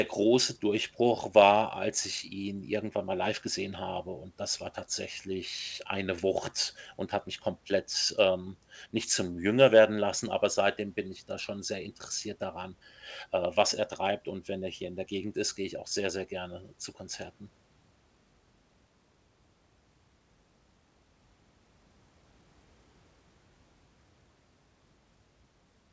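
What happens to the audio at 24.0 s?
At 24.0 s the speech carries on intact, with nothing breaking into it beyond the steady call-path sound, which stops at about 8 kHz.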